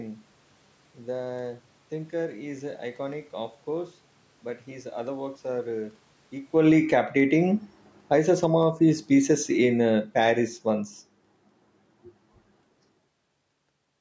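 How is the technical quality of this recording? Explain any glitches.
The recording's main problem is level pumping: an automatic gain control repeatedly turns the speech down and back up between about 6.4 and 11 s, so loudness swings that the talker did not make.

Automatic gain falling happens twice, from 6.42 to 7.11 s (about 12 dB down) and from 7.97 to 11.0 s (about 9 dB down). The gain control judged the input too loud and eased its gain lower over those spans, so speech and room noise sink together. On a waveform the envelope tapers downward across each span. On a spectrogram the whole column, including the noise floor between syllables, fades evenly at all frequencies.

Automatic gain rising happens twice, from 7.04 to 7.73 s (about 7 dB up) and from 8.56 to 9.07 s (about 5 dB up). Finding the input too quiet, the control raised its gain over roughly half a second to 0.7 s, so voice and background swell up together. 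The gaps between words get louder along with the speech, which is what marks this as processing rather than the talker. On a waveform the envelope climbs in a smooth ramp. On a spectrogram the background noise brightens uniformly.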